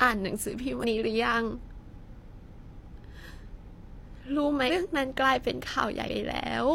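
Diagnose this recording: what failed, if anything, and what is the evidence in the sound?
Speech jumps forward at 0.79, 3.25, 4.65 and 6.04 s, losing about 100 ms each time and about 150 ms at 4.65 s. At the codec stage, compressed frames were skipped: whole frames of roughly 46 ms went missing, and the audio on either side was joined directly.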